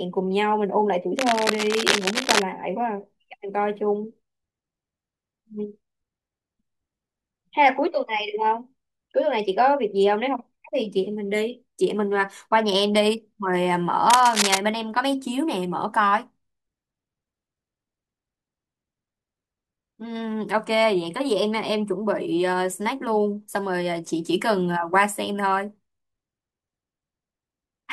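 A speech recording with two bursts of cable scratch noise, from 1.18 to 2.44 s and from 14.10 to 14.58 s, each roughly as loud as the voice, likely from a worn cable or connector being moved. Both appear as dense, ragged broadband smears on a spectrogram and as spiky fuzz on the waveform.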